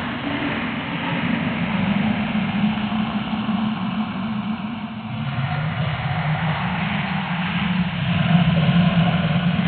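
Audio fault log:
Nothing to log here, as these sounds come through with no technical trouble worth noting anywhere in the clip.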